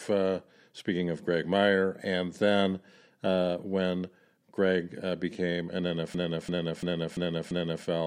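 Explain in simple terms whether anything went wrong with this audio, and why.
After "uh became an", from 6.14 to 7.85 s, a system hang loop occurs: the frozen computer replays one 0.34-second chunk five times, like a skipping record.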